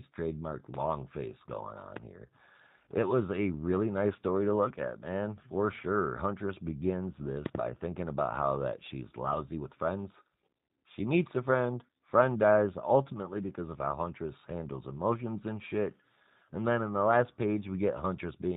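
Throughout the speech, the G.729 codec damage is plainly audible. The missing band above 4 kHz and the slightly rough, synthetic texture point to G.729A at about 8 kbit/s. The codec does not store the waveform. It models each 10 ms frame as a vocal tract filter driven by a pitch predictor and a handful of pulses, so fine detail is replaced by an approximation.

From 1.97 to 1.99 s, just after "face going", a single loud pop lands on top of the speech, peaking around 15 dB above it. At 7.46 to 7.57 s, just before "thinking about how that", two more pops follow in quick succession at a similar level. In each case the speech continues underneath. The likely cause is a sudden voltage step or pulse, as from a switch, plug, static discharge or driver glitch, which the following circuitry shapes into a brief, sharp thump.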